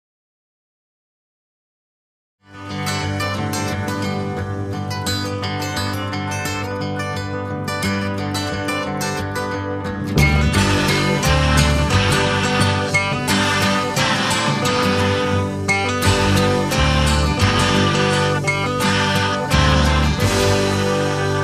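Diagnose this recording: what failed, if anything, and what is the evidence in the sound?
Nothing failed: the level comes up in a smooth fade-in from about half a second before 2.99 s, with no click or hard edge, and no stage from wiring through playback leaves a fault in the sound.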